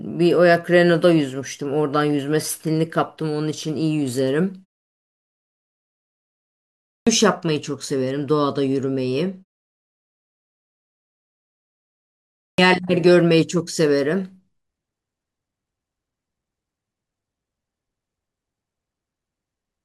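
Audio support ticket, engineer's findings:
Clipped start after a pause, twice: 6.77 to 7.07 s (about 0.3 s lost, after a 2.2 s pause) and 12.31 to 12.58 s (about 0.27 s lost, after 2.95 s). Output device sleeping through the gaps and waking late, so onsets come in abrupt, missing their first sounds.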